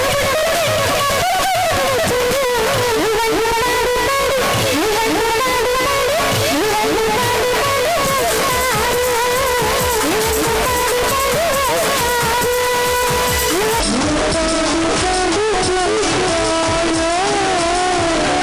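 From 13.80 s to the end, the audio has a wrong sample rate fault. The samples are played back slower than they were captured, with no rate conversion. Everything runs at about two-thirds speed, 0.667 times normal. Pitch falls with it, by about 7 semitones. The sound turns low, heavy and drawn out all at once. A drop of that size fits 48 kHz material being played out at 32 kHz.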